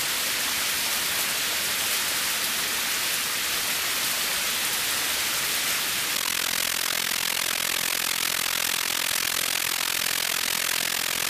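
From 6.15 s to the end at 11.29 s, the sound takes on a fast, rough flutter, a robotic tremolo pulsing around 40 times a second, with level dips of about 60 dB. This is overlap-add ripple: windowed frames were rejoined with an overlap whose gains don't sum evenly, so level swings once per frame.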